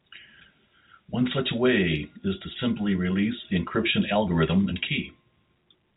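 Nothing is technically wrong with this speech recording, which carries the narrow 4 kHz bandwidth of G.711 telephone coding.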